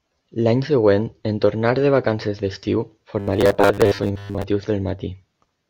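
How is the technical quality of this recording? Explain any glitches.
The recording has one clear glitch. Robotic sound from repeated short buffers runs from 3.20 to 4.44 s, right after "tornar de vacances d'estiu": the speech collapses into a rigid, metallic buzz near 100 Hz that only loosely tracks the words. The likely cause is audio arriving too slowly, so roughly 10 ms fragments get replayed over most of that stretch while the real signal is skipped.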